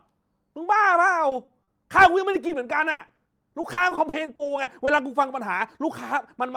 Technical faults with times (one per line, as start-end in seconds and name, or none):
1.29-1.69 short concealed packet loss
2.31-4.89 repeated packet loss (robotic sound)